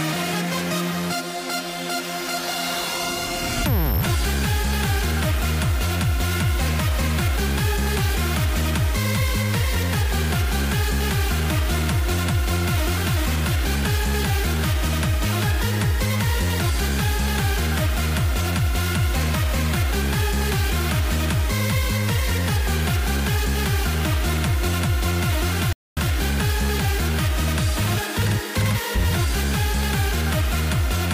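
At 25.73 s the audio cuts out into silence and stays silent until 25.97 s, a gap of about 240 ms. This is a playback stall. It sounds like an abrupt dropout in mid-flow, with no fade on either side. The player was likely starved of data or had its thread blocked. Output stopped until it could catch up. The sound then resumes after the break.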